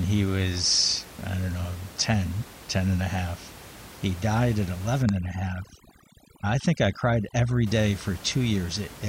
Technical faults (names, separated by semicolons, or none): overdone noise removal